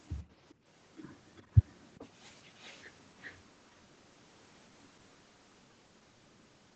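At 0.16 to 0.21 s a very faint copy of the speech appears, trailing it by 404 ms. This is an echo leak. The far side is likely playing the call on a loudspeaker, and its echo canceller let part of that sound back into the microphone. It sits roughly 40 dB below the speech, a brief ghost rather than a clear repeat.

From 0.54 to 0.72 s the room sound ducks, then returns. This is background gated by the echo canceller. The canceller pulled the microphone down hard while the loudspeaker played, by about 23 dB at the deepest point. The dip lasts around a fifth of a second. The background vanishes and comes back.

The echo leak returns three more times, always 404 ms behind the speech. It runs from 1.37 to 2.08 s and from 2.45 to 2.83 s at roughly 30 dB down, then from 3.21 to 3.34 s at about 25 dB down, the loudest. These longer stretches sound like a delayed double of the speech. Like the rest of the call audio, they stop at 8 kHz.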